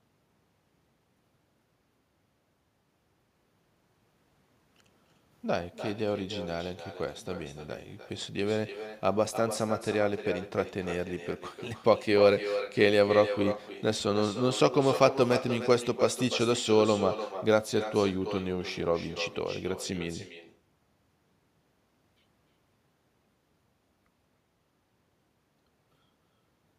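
From start to finish the speech carries echo with no canceller: the far end is playing the call over a loudspeaker, its microphone catches that playback, and nothing strips it out before it returns. Each phrase is trailed, roughly a third of a second later, by a thinner copy sitting about 11 dB down. Unlike ordinary room reverberation, which smears into a smooth decay, this arrives as a distinct, delayed repeat.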